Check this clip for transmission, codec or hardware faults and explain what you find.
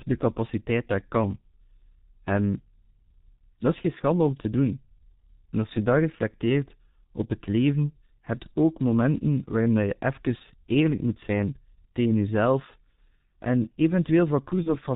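Two faults stand out here: the whole recording has gone through the G.723.1 codec, and there's a short packet-loss dropout right at the end.

The G.723.1 codec colours the entire clip. It's an old internet-telephony codec, and at 6.3 kbit/s it's running at its higher rate, but the damage is still heavy. It works in 30 ms frames and throws away everything above 4 kHz, so the speech comes out muffled and hoarse. Because the vocal model only updates frame by frame, consonants smear together rather than landing crisply.

Near the very end, from about 14.63 to 14.76 s, there's VoIP packet loss concealed by the speech codec. One frame went missing, about 30 ms of audio, and the decoder papered over the gap by carrying forward its last pitch and filter settings at falling gain. The sound stretches into a brief buzzy tone or coloured noise that fades. Since each frame builds on the one before, the speech stays weak or distorted for a while after the gap, which is why the disturbance lasts roughly 130 ms overall.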